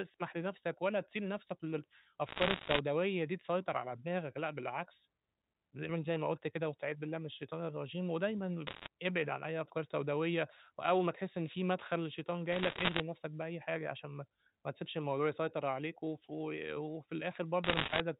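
A speech recording over a telephone line has bit errors on a digital phone line. Bursts of crackle occur from 2.28 to 2.79 s, 8.67 to 8.88 s, 12.52 to 13.00 s and 17.64 to 18.00 s. Each flipped bit corrupts a single sample. Hits on the sign or upper bits give sharp ticks. The density suggests roughly one or two percent of bits going wrong. The speech underneath stays intact, limited to the 4 kHz telephone band.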